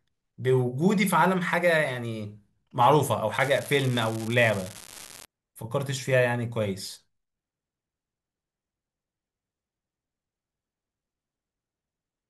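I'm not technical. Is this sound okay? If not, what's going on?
No. From 3.34 to 5.26 s there's an unreliable data bit: a steady fizzing crackle of identical ticks that continues through pauses, unlike distortion that only appears on loud sounds.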